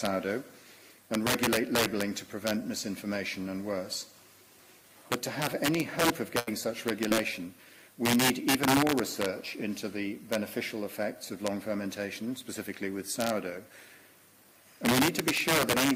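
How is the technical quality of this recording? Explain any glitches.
The technical quality is poor: loud passages crack harshly throughout, and the audio drops out twice in quick succession just after the six-second mark.

Integer overflow affects the whole recording. The signal is pushed about 10 dB past full scale, and instead of being limited, the loudest peaks, around one percent of samples, wrap to the opposite sign. Each one is a violent crack, far sharper than ordinary clipping. On a waveform, peaks jump abruptly from one extreme to the opposite one. On a spectrogram, they show as thin vertical broadband streaks.

A burst of packet loss runs from 6.39 to 6.49 s. About 80 ms of audio never arrived in time, and the receiver bridged roughly 75 ms of it by extending the last sound and fading it down. It is heard as a held buzz or fading hiss, then a jump forward with the material in between gone. 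A spectrogram shows smeared, repeating texture that dims, then a hard discontinuity where real audio resumes.

A short concealed packet loss occurs from 7.09 to 7.13 s. About 20 ms went missing, and roughly 19 ms was filled by continuing the preceding sound before blending back. It comes across as a brief smear or wobble, and a short transient can disappear entirely. On a spectrogram, it appears as a narrow blurred sliver with a faint seam at each edge.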